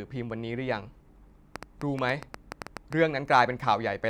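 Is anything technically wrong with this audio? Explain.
Yes. A train of clicks runs from 1.56 to 2.94 s. Likely interference injects about ten pulses at an uneven eight per second, ticking around 10 dB above the speech.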